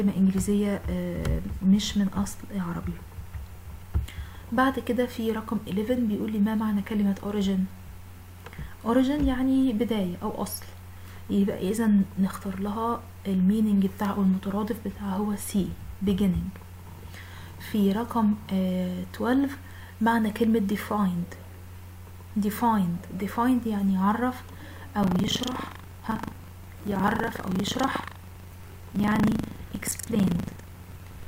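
From 25.0 s onward, the ring buffer's writer and reader cross every period. This buffer tearing splices in stale audio, leaving a rattling 25 Hz buzz.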